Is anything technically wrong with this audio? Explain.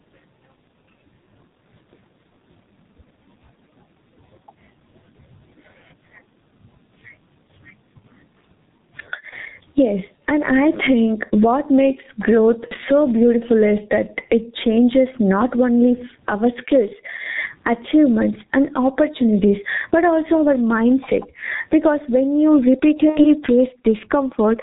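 Yes. Three problems are audible in this speech clip.

Gain pumping runs throughout. The level seems to swing by around 20 dB. The likely cause is gain set far too high, with a fast limiter pulling it down on each loud syllable. Everything sounds squashed.

G.723.1 codec damage is also present throughout, and it is heavy. The muffled, hoarse quality and missing content above 4 kHz point to G.723.1 at about 6.3 kbit/s. Its coarse 30 ms frames and slow voice model blur consonants.

VoIP packet loss concealed by the speech codec occurs at 9.29–9.34 s, 12.68–12.75 s and 23.09–23.26 s. The decoder filled each gap by repeating its last pitch and filter at falling gain. The first two fit one lost 30 ms frame, the last two frames. Each gap sounds like a brief buzzy tone or coloured noise that fades.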